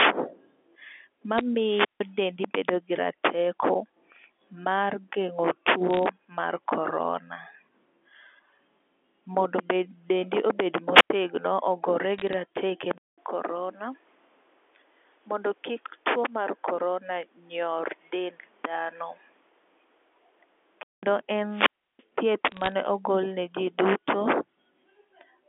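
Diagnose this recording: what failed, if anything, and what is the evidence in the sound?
Bit errors on the digital phone line show up as bursts of sharp ticks and crackle riding on otherwise unchanged speech, at 1.38–1.41 s, 5.91–6.06 s (between "mar geng'o" and "mar corona"), 12.18–12.33 s and 22.48–22.72 s. This is a transmission-stage fault. Flipped bits in the mu-law stream corrupt individual samples, and hits on sign or high-order bits produce the loudest clicks. The error rate sits at a few tenths of a percent, enough for audible clusters but not continuous noise.

A wireless microphone squelch dropout occurs three times. Each time, hiss swells, the output falls to near silence, and the signal comes back. The gaps are 1.61–2.11 s with a 158 ms mute, where the voice resumes on "dendi bedo gi rateko", then 10.92–11.10 s with a 96 ms mute, and 21.49–22.04 s with a 330 ms mute. The stage is the analogue RF link. 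FM signal strength drops below the receiver's squelch threshold, and the receiver gates its output until the carrier recovers.

An input switch to a poorer device is the likely cause of the change from 12.98 s to 21.03 s. A 200 ms silence opens the section. After it, the sound turns duller, the level drops by about 5 dB, and a new noise floor sits about 35 dB under the signal. Full quality returns at 21.03 s. This points to the driver or input-routing stage, where the system reassigned capture mid-recording to a narrower-band microphone or headset profile with its own gain and self-noise.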